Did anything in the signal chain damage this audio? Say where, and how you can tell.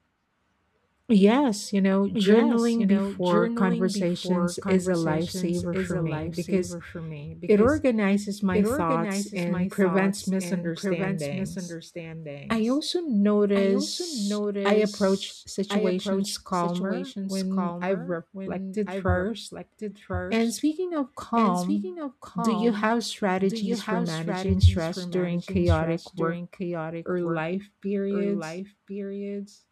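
Yes, at capture: a doubled audio track throughout, a dry copy about 5 dB down, roughly a second behind, likely a slower second path. Unlike echo, it never decays.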